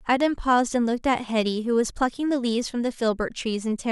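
Nothing stood out on listening to this speech recording.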